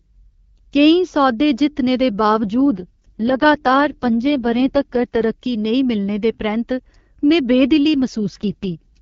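A speech clip carrying two AMR rate drops. From 2.25 to 5.24 s, after "केईं सौदे जित्तने दे" and until "नेईं मिलने दे परैंत्त", and from 8.17 s to the end, after "दे परैंत्त में बेदिली", the wideband voice turns rough and synthetic without losing band or going silent. The sound fits the network pushing the AMR-WB link down from 12.65 to 6.6 kbit/s.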